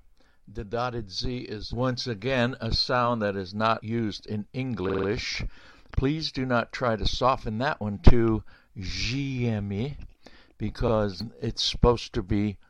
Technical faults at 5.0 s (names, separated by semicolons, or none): repeated frames